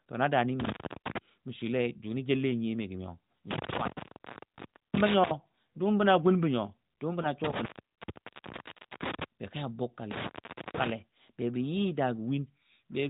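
Intermittent contact first breaks the speech at 0.60 to 1.18 s. A loose cable or plug momentarily loses connection, so the sound drops out for about 0.34 s with crackle where the contact opens and closes. Only faint hiss remains while it is open. On a waveform this shows as a collapse to a thin noise floor bracketed by sharp spikes. On a spectrogram it appears as a blank band with vertical broadband streaks at each edge.

The same fault returns at 3.51 to 5.31 s, where the line is open for about 1.06 s in total.

At 7.22 to 7.27 s a single lost AMR speech frame leaves a 20 ms gap. The decoder rebuilt it from the previous frame's pitch and vocal-tract settings at reduced gain. The result is a brief dip or warble rather than silence. The waveform shows a short amplitude sag, and the spectrogram shows a momentary smearing of the harmonics, all below 4 kHz. That band limit comes from narrowband AMR coding, which fits a 12.2 kbps mode.

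Intermittent contact strikes again at 7.44 to 9.24 s, with about 1.38 s open, and at 10.11 to 10.90 s, with about 0.48 s open. Each has the same crackling edges and hiss-filled gaps.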